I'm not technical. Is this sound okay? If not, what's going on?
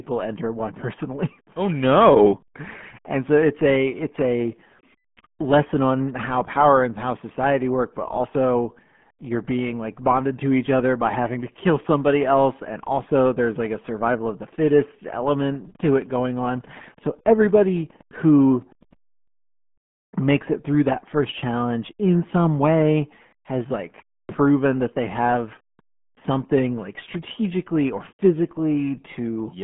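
No. RealAudio 14.4 codec damage runs through the whole recording. This is an early speech-squeezing system built for dial-up modems. To fit the voice down such a narrow channel it throws away everything above about 3.7 kHz and rebuilds the rest roughly. That leaves the speech muffled and thin, like a poor phone line, with a gargly, bubbling edge on every word.

Wi-Fi interference appears from 15.2 s to 19.0 s, just after "survival of the fittest". A nearby Wi-Fi radio sends out a short signal every 102.4 ms. The audio wiring picks this up and turns it into sound, so you hear a faint, steady ticking about ten times a second underneath the voice. It stops once the radio's signal is no longer getting in.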